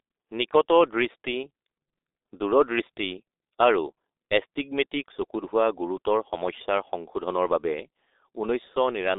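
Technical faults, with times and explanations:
Throughout, G.723.1 codec. The speech is confined to a narrow telephone band, roughly 300 Hz to 3.7 kHz, with nothing at all above 3.8 kHz. That missing top end makes it sound muffled and boxed-in. The damage is heavy. Consonants smear and the voice turns hoarse and buzzy. This happens because the codec rebuilds speech from a coarse model refreshed only every 30 ms. That coarseness fits a very low rate near 6.3 kbit/s.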